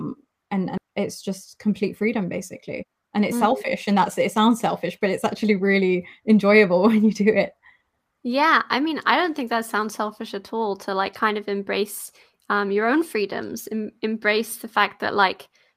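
At 0.77 to 0.79 s there is a skip ahead. Roughly a second of speech is simply gone, and nothing fills the gap. Playback lurches from one point to a later one, which fits a jitter buffer throwing away audio when it overflowed. On a waveform the envelope changes abruptly at the join. A spectrogram shows harmonics and formants that break off and restart at unrelated positions, with no silence between them.

From 2.79 to 3.97 s a jitter buffer speed-up plays the speech at about 113% speed, trimming roughly 150 ms. A second, gentler one runs from 4.38 to 5.91 s at about 105%, removing around 70 ms. In both, the buffer was holding too much delay and shed it by cutting out short pitch-period pieces, one after another. The pitch stays the same, but syllables come out hurried and compressed. On a spectrogram, harmonic lines keep their spacing while each segment gets shorter. In the waveform, periods are missing without any visible gaps.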